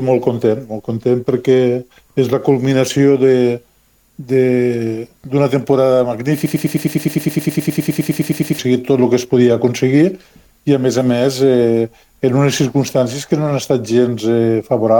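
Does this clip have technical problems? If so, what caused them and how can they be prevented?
Yes. A broken-record loop runs from 6.46 to 8.59 s, where a 103 ms fragment repeats exactly, back to back, 21 times, producing a rapid mechanical stutter. The player, encoder or stream likely stalled and kept resending the last fragment it held, so the audio due in those two seconds is lost. Adequate buffering and a watchdog that mutes stalled output instead of replaying it would prevent this.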